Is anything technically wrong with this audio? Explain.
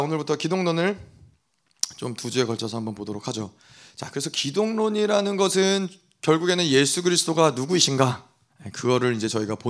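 No, nothing is technically wrong.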